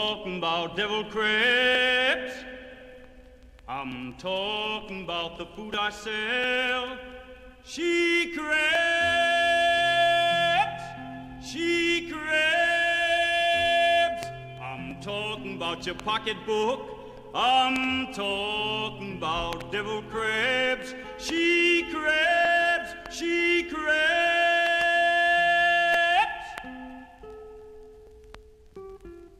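At 6.44 s there is a jump forward in the sound. About 5 ms of audio is missing. The two sides meet directly, with no gap of silence. At 24.67 s the same thing happens again, with a longer skip of about 10 ms. Both points sound like a likely dropped buffer (overrun). The software did not read the incoming samples in time. The hardware overwrote them before they were saved.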